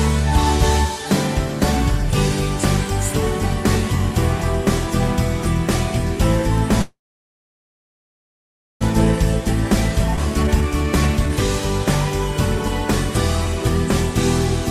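At 6.81 s the audio stops moving forward. The last sound is held only briefly, as a short fading continuation, and then the clip is silent for about 1.9 s until it resumes at 8.83 s, roughly 2 s after the stop. The resumed audio picks up exactly where it left off, with nothing lost. This call audio freeze was likely caused by packets stalling in transit while the jitter buffer ran dry. What marks it as a freeze rather than a dropout is that time is added to the audio but no content is removed, so the whole clip now runs about 2 s late. The skip ahead from 10.17 to 10.19 s works the opposite way. Playback jumps almost seamlessly, with only a few milliseconds of fill, over about 0.7 s of audio that is simply missing. The two sides are joined nearly directly and the added delay is cut back. Unlike the freeze there is no pause, and unlike a speed-up the loss happens in a single abrupt splice. 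Between 10.43 and 11.33 s a jitter buffer speed-up follows, with the audio running at about 126% speed while keeping the same pitch. Around 0.3 s in total is trimmed away as many tiny pitch-period cuts spread across the stretch rather than in one jump, which makes the passage sound hurried as the receiver shrinks its backlog.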